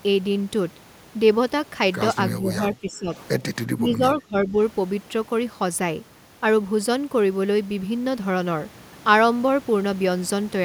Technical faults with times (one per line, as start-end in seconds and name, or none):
2.38-3.11 speech suppressed in double talk
3.74-4.56 speech suppressed in double talk